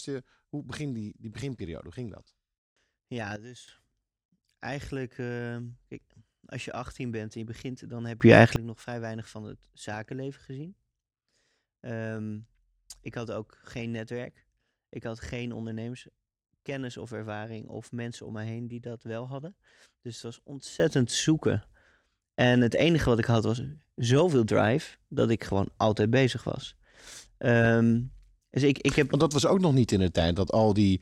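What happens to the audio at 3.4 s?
From 3.36 s to 3.68 s the speech drops by about 12 dB in a sudden gain jump, likely a digital gain change applied between two samples with no ramp. The background noise falls by the same amount at that instant, unlike a fade or compressor ducking.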